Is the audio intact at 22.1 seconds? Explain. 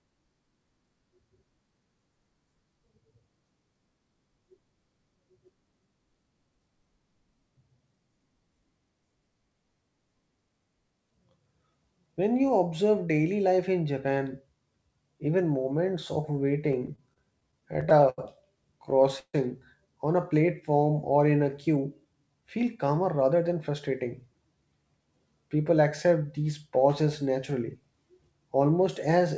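No. From 21.67 to 23.41 s, between "platform or in a" and "than frustrating", the speech runs about 10% fast at unchanged pitch and sounds hurried. This is a jitter buffer speed-up: the receiver trimmed short pitch-period pieces, roughly a fifth of a second in total, to drain excess buffered delay.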